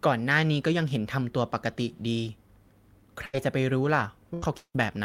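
Around 3.21 to 3.36 s there's a lost packet rebuilt from error correction: the next packet carried a low-bitrate copy, so about 20 ms plays back rougher and noisier instead of dropping out. The same thing happens again at 3.33, 3.84, 4.00 and 4.42 s.

Overlapping that first stretch, from 3.25 to 3.35 s, there's a burst of packet loss. About 80 ms never arrived, so the receiver stretches the last sound into a fading buzz or hiss and then jumps ahead with that bit missing. It happens again from 4.34 to 4.44 s, another 80 ms or so.

Then from 4.58 to 4.76 s the sound carries on as a fading tail, goes fully silent for about 60 ms, and resumes with roughly 160 ms gone. That's likely a long network dropout.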